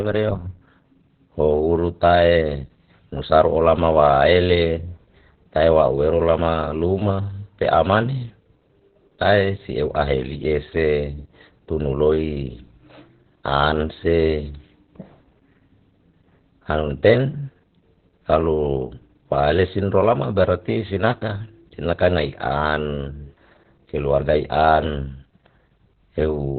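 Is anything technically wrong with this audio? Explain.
Yes. Throughout, the speech carries Opus voice compression damage consistent with a very low bitrate, around 8 kbps. The SILK linear-prediction coder runs narrowband, cutting everything above 4.4 kHz and quantizing the excitation coarsely, so the speech sounds muffled, hoarse and slightly robotic.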